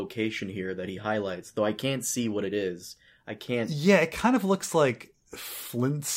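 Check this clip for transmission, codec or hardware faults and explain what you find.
No transmission, codec or hardware faults turn up in this clip.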